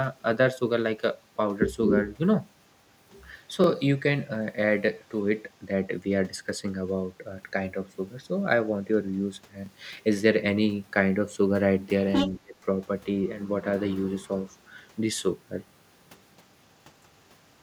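It's a speech clip with a stutter that repeats on a fixed schedule: at 3.64–3.66, 9.66–9.68 and 15.68–15.70 s you get a quick click-like hiccup. That's overlapping chunks. The audio was handled in 6 s pieces, and each new piece starts about 21.33 ms before the previous one ended, so that slice plays twice at every join. Around 12.04–12.30 s a second voice comes through at roughly the same level as the talker. That's likely the other side's voice leaking through, with the far end's loudspeaker audio getting past the echo canceller into the mic. Right after, at 12.41–12.57 s, the talker's own speech dips hard, by something like 35 dB, over roughly 150 ms. That's likely speech suppressed in double talk: with both sides active, the canceller couldn't tell the talker from the echo and pulled everything down.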